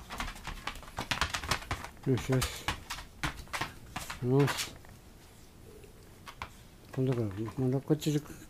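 Listening closely, nothing in the audio stood out as a technical problem at any point.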